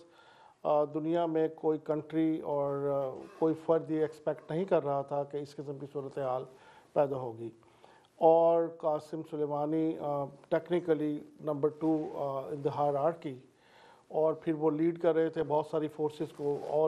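Throughout, the sound is dull and gurgling, with a granular roughness and upper bands that flicker in and out. This is likely MP2 compression at a starved bitrate, which fits around 80 kbps: too few bits leave sub-bands switched off or coarsely quantised.

At 15.42 s a brief burst of burbling cuts across the audio. This is DAB burbling: a small fraction of bit errors, on the order of a tenth of a percent, slipped past error correction into the MP2 audio data, corrupting three frames.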